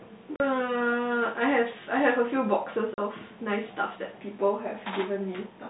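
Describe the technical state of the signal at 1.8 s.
At 1.8 s the speech is intact, passing through G.711 telephone coding with its usual narrow band and no fault at that moment.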